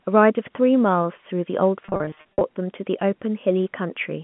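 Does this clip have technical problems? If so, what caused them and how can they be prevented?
Yes. Between 1.83 and 2.41 s the speech suffers packet loss with pitch repetition. About 340 ms of audio went missing, scattered across roughly 580 ms in runs no longer than 50 ms. Each gap was filled by repeating the last pitch period, so the passage sounds stuttery and buzzy, with brief held tones rather than dropouts, all within the 150 Hz to 3.4 kHz band of the G.711 telephone line. A jitter buffer with forward error correction or redundant packets, on a less congested network path, would prevent this.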